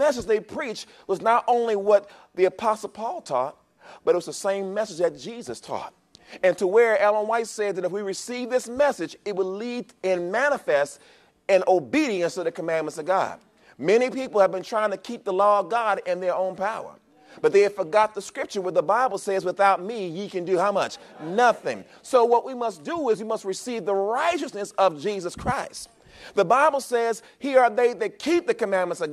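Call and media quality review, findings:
Nothing stood out on listening; no findings to raise for this clip.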